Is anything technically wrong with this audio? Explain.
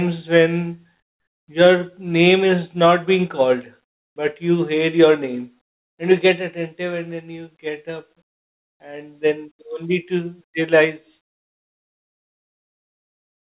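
Yes. From 1.0 to 1.48 s, comfort noise replaces the background. The real room sound drops to a steady, featureless hiss about 15 dB quieter, likely synthetic fill from discontinuous transmission. A spectrogram shows a smooth, uniform band with no texture, and the waveform shows a flat, even, lower-level stretch.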